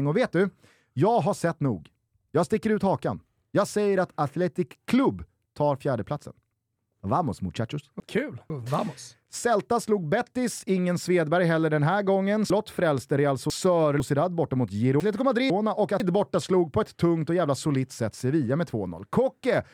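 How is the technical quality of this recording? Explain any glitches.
The speech is disrupted three times by chunks out of order. Between 7.0 and 8.5 s, and again between 12.5 and 14.0 s, a 500 ms chunk plays two chunks late. From 15.0 to 16.0 s, one chunk plays one chunk late. Nothing is lost, but each passage sounds jumbled at the hard joins.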